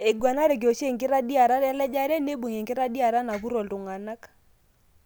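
No technical faults are audible.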